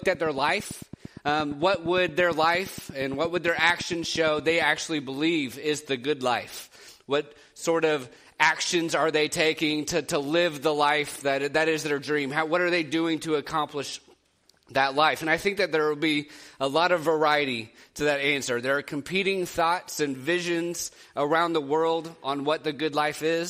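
From 0.03 to 4.63 s, a regular train of clicks ticks at 8.7 per second, peaking above the sound, likely interference, unlike random crackle.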